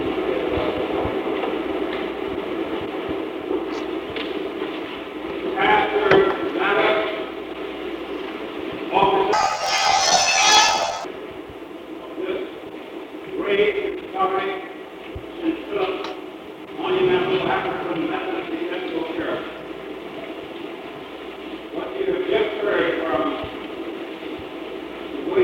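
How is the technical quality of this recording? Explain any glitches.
There's one clear glitch: from 9.33 to 11.07 s, planar audio read as interleaved. Each 23.22 ms block, which fits a 1024-sample block, stores all of one channel and then the other but gets read as alternating pairs, so it plays twice at double speed. That jumps the sound up an octave, with a flutter at 43.1 Hz.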